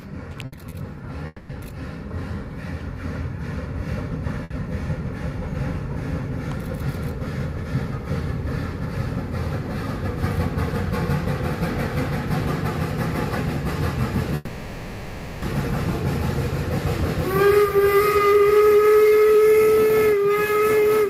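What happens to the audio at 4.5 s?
A short stall from a late packet, 4.43 to 4.52 s: the emptied jitter buffer stretches the last sound about 70 ms, showing as a smeared, repeated-looking band on the spectrogram, then resumes with nothing missing.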